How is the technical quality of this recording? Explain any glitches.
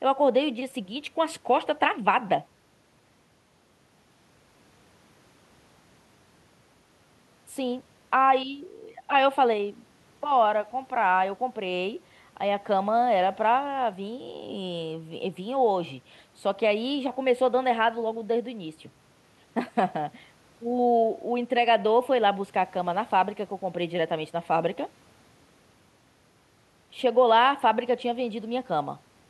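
The technical quality of this recording is sound, with no glitches to explain.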